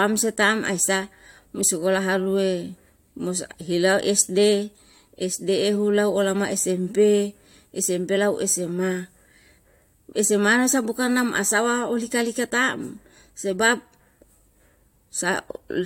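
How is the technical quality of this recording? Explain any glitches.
No technical faults can be heard in this recording.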